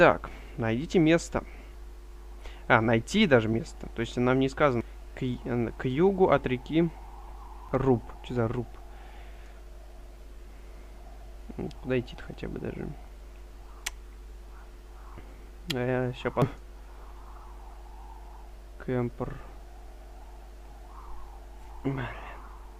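Damaged data in a compressed stream strikes at 1.74, 4.81, 7.69, 13.08 and 16.42 seconds. At each point part of the encoded stream was corrupted, with bytes lost, zeroed, overwritten or mixed with foreign data, so the decoder misreads or rejects the affected frames, loses sync and hunts for the next valid frame header. Each event is a brief disruption in the audio, heard as a chirp, squawk, click or short gap.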